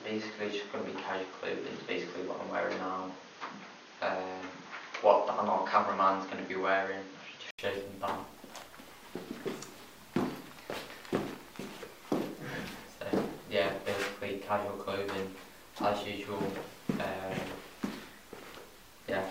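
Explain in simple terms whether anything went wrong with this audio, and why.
For the first 7.59 seconds the sound is dull and boxy. Nothing above about 6.6 kHz gets through, so the crisp top end is missing. There is also a faint new hiss underneath. Then, after a short gap of about 80 ms, the sound suddenly opens up and its loudness shifts a bit. This is most likely an input switched to a poorer device. The recording began on a poorer device, then moved to a better one.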